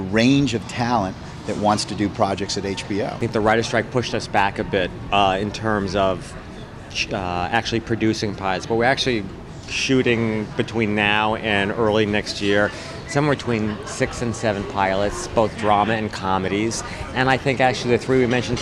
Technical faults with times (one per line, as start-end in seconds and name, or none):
none